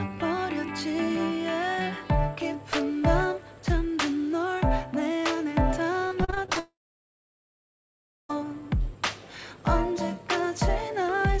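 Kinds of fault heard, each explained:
Repeated packet loss (robotic sound): From 6.08 to 6.57 s the stream breaks up in seven short holes, the longest about 36 ms, each patched by extending the preceding sound before real audio resumes and the next hole arrives. Roughly a third of this half-second is concealment rather than received audio, so the passage sounds choppy, with small pieces missing between the patched fragments.
Long network dropout: Immediately afterwards, from 6.59 to 8.31 s, about 1.7 s of audio is lost, most likely because the network stopped delivering packets for that whole stretch. The receiver briefly continues the last sound, which decays, and then leaves silence for roughly 1.6 s of the gap. Audio resumes at 8.31 s with the missing portion never recovered, so the content simply jumps forward. The band limit at 8 kHz fits the G.722 call codec path.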